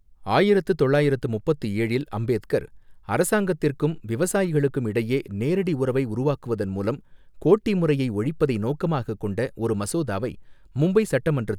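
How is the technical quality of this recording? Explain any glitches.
No glitches or technical faults can be heard here.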